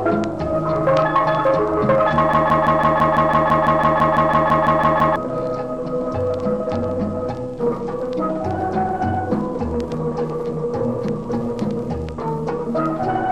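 From 2.34 s to 5.16 s, a broken-record loop: the player or stream likely stalled and kept resending its last held fragment. A 0.17 s piece of sound repeats exactly, back to back, 17 times, and the audio that belonged there is lost.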